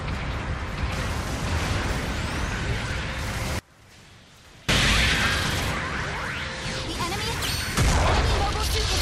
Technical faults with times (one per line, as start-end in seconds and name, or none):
3.59-4.69 audio dropout to a faint residue